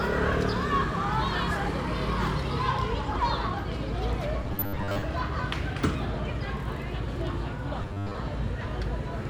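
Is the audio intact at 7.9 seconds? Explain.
No. Robotic sound from repeated short buffers runs from 7.82 to 8.15 s, likely from audio arriving too seldom: a roughly 10 ms snippet is looped in place of most of the real sound, imposing a rigid, metallic 100 Hz buzz.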